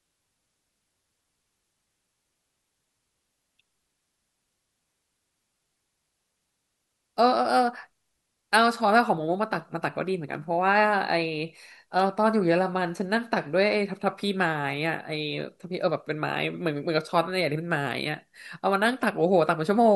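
At 11.99 s, a nearby switch, motor or static discharge likely arced briefly, and the audio line picked up that burst as an electrical switching spike. It sits on top of the speech as a sharp snap or tight cluster of clicks, about 10 ms long, peaking at roughly -20 dBFS.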